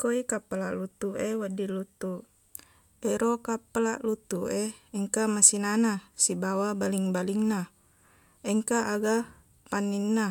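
Listening to the speech recording, nothing technical stood out as a problem at any point.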